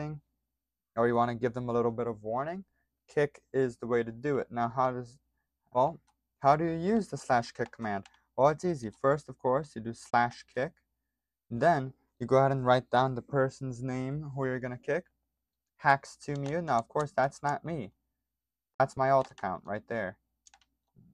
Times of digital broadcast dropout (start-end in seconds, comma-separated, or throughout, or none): 10.10-10.14, 18.74-18.80